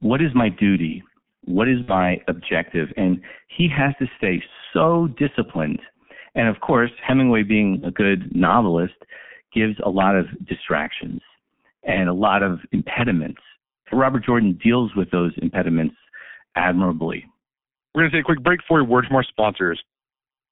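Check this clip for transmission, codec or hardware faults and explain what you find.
Three kinds of fault are audible in this speech clip.

The G.723.1 codec runs throughout at 6.3 kbit/s, with heavy damage. Audio is confined to roughly 150 Hz to 3.4 kHz. The slow 30 ms frame updates and coarse voice model leave the speech muffled and hoarse, with smeared consonants.

VoIP packet loss concealed by the speech codec occurs twice. The first is from 1.82 to 1.95 s, where the 60 ms gap points to two lost frames. The second is from 7.79 to 7.86 s, right before "a good novelist gives", and fits one lost 30 ms frame. The decoder extends the last pitch and filter with falling gain, so each gap becomes a fading buzzy tone or coloured noise. The speech stays weakened briefly afterwards.

Integer overflow appears at 13.00 s and again at 18.47 s, between "to take a quick" and "for a word from". Peaks pushed about 1 dB past the integer limit wrap to the opposite sign. 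Each one produces a sharp, violent crack, harsher than ordinary clipping.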